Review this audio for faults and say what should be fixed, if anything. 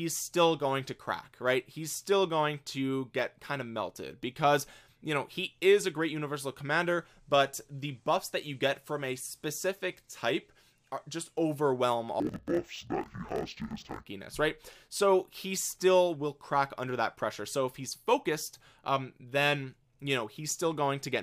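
Between 12.2 s and 14.07 s the audio is interleaved audio read as planar. Each block of alternating left and right samples gets split down the middle. The first half plays as left and the second half as right. Both halves stretch to fill the block, so the sound drops an octave and doubles. A choppy flutter runs at about 43 Hz. That points to blocks of roughly 23 ms, which fits a 1024-sample buffer. To prevent it, match the reader's channel layout to the stream's declared interleaved format.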